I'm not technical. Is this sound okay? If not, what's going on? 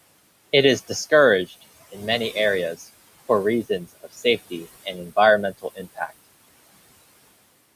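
No. The clip suffers from speech cut by the noise suppressor, where the noise-removal step mistook bits of speech for background hiss and turned them down. Just after "in many areas for", between 3.69 and 4.25 s, then again at 4.84 to 5.17 s and 5.52 to 6.11 s, parts of the speech sound swallowed for a fraction of a second. Unlike a true dropout, the sound never goes fully silent. It just sinks and fades along with the faint room noise.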